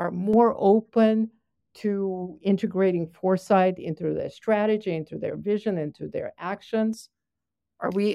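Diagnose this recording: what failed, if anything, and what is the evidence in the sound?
De-emphasis applied wrongly at the playback filter stage, 0.34 to 6.93 s: the speech turns dull as treble rolls off smoothly, about 11 dB down at 10 kHz, with no sharp low-pass cutoff.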